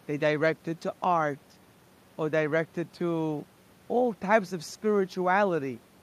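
No technical faults can be heard in the speech, and the only background is the room's own noise, sitting about 33 dB below the voice as part of the recording itself.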